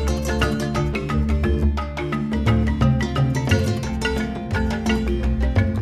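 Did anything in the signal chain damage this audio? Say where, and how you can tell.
No, nothing in the chain damaged this audio.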